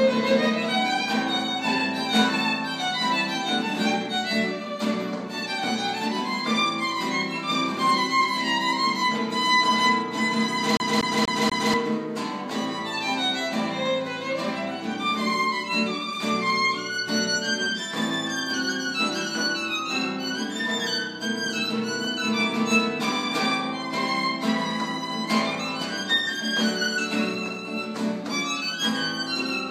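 At 10.77 s a disc scratch makes the player jump back one track per turn: a 242 ms section repeats four times, stuttering evenly until 11.74 s.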